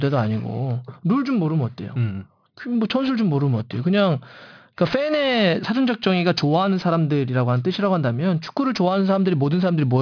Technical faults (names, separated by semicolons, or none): aliasing